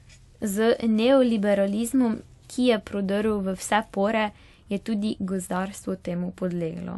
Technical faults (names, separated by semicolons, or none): transcoding between lossy codecs